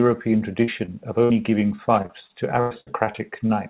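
At 0.64–0.70 s and 0.86–0.90 s, short concealed packet loss leaves brief smears where missing audio, about 40 ms and 20 ms, was patched by extending the preceding sound. On a spectrogram these look like slightly blurred, too-steady harmonics.

At 1.24–1.32 s, a burst of packet loss removes about 60 ms. The continued sound fades out, which shows as a flat, decaying waveform envelope before the audio resumes.

From 1.76 to 3.51 s, repeated packet loss (robotic sound) gives choppy audio. Nine gaps were each filled with extended sound, the longest 98 ms, covering about 17% of that stretch. The spectrogram shows recurring smeared blocks, and all energy stays below 4 kHz, consistent with a narrowband call codec.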